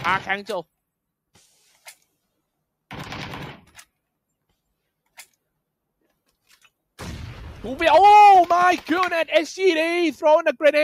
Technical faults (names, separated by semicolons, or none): none